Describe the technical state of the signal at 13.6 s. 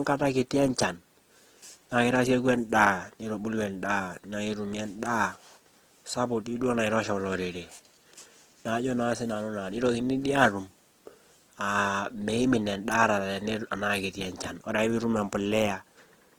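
At 13.6 s the speech carries Opus compression damage, present throughout the whole clip. It is plainly audible: the voice sounds rough and grainy, with a noisy sheen where detail should be. That is likely the CELT music mode at a low rate, around 16 kbps, filling starved bands with folded or noise energy. On a spectrogram the bands look full but smeared and speckled rather than holed, still reaching to about 20.2 kHz.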